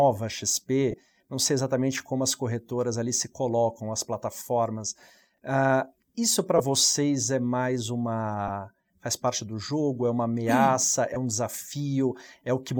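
Speech, marked by two kinds of fault. Lost LE Audio frames occur at 0.91–0.94 s (about 22.5 ms, which fits three 7.5 ms frames), 6.58 s, 8.48 s and 11.14 s. The decoder fills each gap by repeating the last spectrum with scrambled phase, so the sound briefly turns into a hissy smear instead of going silent. That smear sets it apart from a plain dropout. At 5.34–5.38 s, chunks out of order put a 10 ms chunk three chunks late. Nothing goes missing, but the jumbled sequence and the hard joins distinguish it from frame loss.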